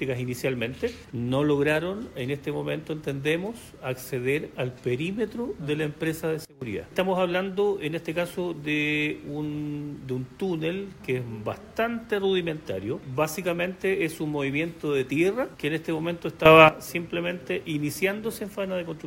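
At 6.45 s the level drops by about 20 dB, recovering by 6.62 s; at 16.46 s it rises by about 12 dB until 16.69 s. Each is a sudden gain jump, with sound and background noise stepping together, likely a gain setting applied without a ramp.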